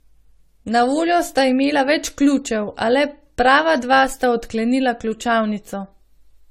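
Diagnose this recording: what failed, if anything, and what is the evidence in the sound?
The failure sits in the codec stage, and it runs through the whole speech clip. The sound is swirly, smeared and hollow, worse than a single 64 kbit/s AAC-LC pass would explain. Consonant attacks blur, and nothing is present above 17 kHz. The likely cause is generation loss. The audio seems to have been decoded and re-encoded about seven times. Each pass quantised on a shifted frame grid, so the noise and spectral holes piled up.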